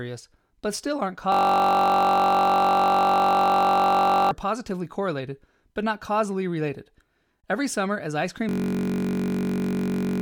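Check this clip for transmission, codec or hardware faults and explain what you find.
A system hang loop interrupts the speech twice. From 1.32 to 4.31 s, and again from 8.49 s to the end of the clip, the speech gives way to a steady buzz at about 47 Hz. The driver or computer froze while the sound hardware kept replaying the same 21.33 ms ring buffer, which fits a 1024-sample buffer, so one tiny slice repeats until the system recovers. Roughly three seconds of speech is lost in the first stall, and about one and a half seconds in the second.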